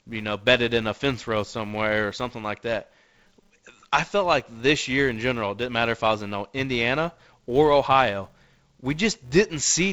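A filter in the processing chain is restarted on every block, losing its state and beginning each block from silence. Across this speech clip, each restart leaves a small transient, and these repeat at 200 Hz, one every 5 ms. That rate fits blocks of 80 samples at 16 kHz. The result is a steady buzz that rises and falls with the level of the speech. The G.722 wideband coding, with speech clear up to about 7 kHz and light low-band noise fitting its 48 kbit/s mode, sits beneath the buzz.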